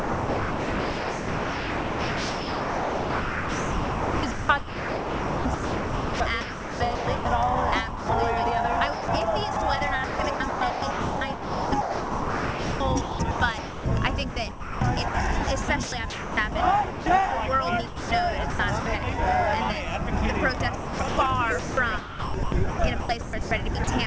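Sound chopped by the voice detector runs from 0.00 to 7.25 s, 8.93 to 17.06 s, 17.87 to 18.86 s and 20.57 to 23.87 s. The audio keeps breaking into comfort noise, about 6.5 s of the first stretch alone, as a sending-side detector likely misjudges quiet passages as background. Sound dropped by the voice detector at 7.88 to 8.09 s gives way to 210 ms of steady synthetic noise, likely because the detector stopped transmitting. The call path carries nothing above 8 kHz, which fits G.722 at 64 kbps.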